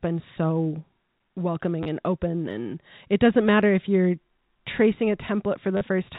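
At 1.83 s, just before "and open", about 30 ms of speech is lost and replaced by packet loss with last packet repeated: the receiver replays the final received packet until fresh audio arrives. At 5.77 s a 40 ms loss is concealed the same way. The replayed fragment doesn't join the waveform at a pitch boundary, so the short run buzzes at roughly 100 Hz, which points to 10 ms packets. What sets this apart from a plain dropout is that there is no silent gap, only a brief robotic stutter, heard through the narrow G.711 telephone band.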